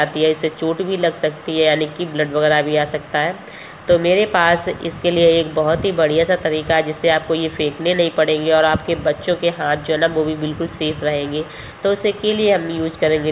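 No technical faults are audible.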